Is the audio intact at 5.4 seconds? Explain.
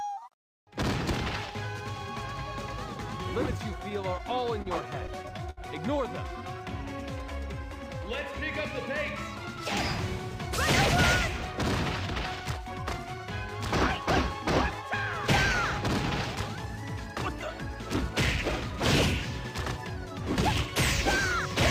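No. At 5.4 s the audio is in a burst of repeated stalls (stutter) from 5.07 to 5.59 s: packets arrived late, so the jitter buffer emptied four times and the receiver stretched the last sound, longest about 67 ms. Unlike packet-loss dropouts, nothing is missing; the sound just drags and hiccups.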